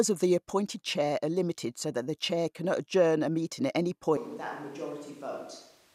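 From 4.17 s, the speech turns abruptly hollow and roomy, about 10 dB quieter, with more room noise. Likely a switch to a distant microphone.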